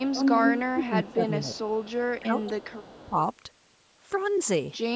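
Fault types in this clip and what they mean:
Speech suppressed in double talk: with both sides talking at once, the echo canceller likely took this voice for loudspeaker echo and turned it down. It dips by up to about 15 dB, mostly between 0.73 and 1.57 s. It removes level, leaving gaps, rather than adding a copy.
Echo leak: a second copy of the voice arrives 358 ms late, likely because a loudspeaker's echo was not fully cancelled. From 0.09 to 0.87 s it is nearly as loud as the speech, then fainter. Unlike suppression, it adds sound rather than taking it away.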